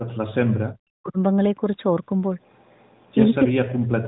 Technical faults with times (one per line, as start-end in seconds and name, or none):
0.00-1.18 speech suppressed in double talk
3.49-4.08 speech suppressed in double talk